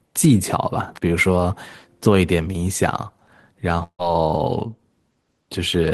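From 3.83 s to 4.02 s the speech turns into a fading buzz for about 150 ms, drops to near silence, then resumes with roughly 160 ms missing. This is likely a long network dropout, with the receiver filling the gap by stretching the last sound.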